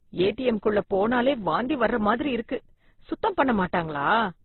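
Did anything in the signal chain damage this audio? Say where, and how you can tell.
Yes. Transcoding between lossy codecs runs through the whole clip, at the codec stage. Nothing survives above about 4.1 kHz, and the first codec's artefacts are heard together with the second encoder's own artefacts. Two coding styles heard at once point to a chain, likely an Opus encode near 12 kbit/s re-encoded as HE-AAC near 24 kbit/s. The second codec spent its bits on the first one's damage, and the lowest cut-off in the chain remains.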